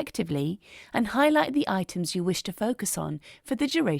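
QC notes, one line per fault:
No technical faults are heard anywhere in the clip. Nothing in the audio calls for a QC note.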